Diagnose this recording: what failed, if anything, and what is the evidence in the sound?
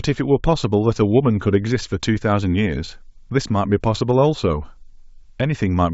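Nothing in this speech recording points to a failure at any stage of the chain. What can be heard is G.722 wideband telephone coding at 64 kbit/s, leaving at most a faint trace of coding noise.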